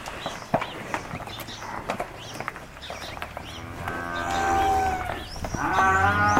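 No technical faults can be heard anywhere in this audio.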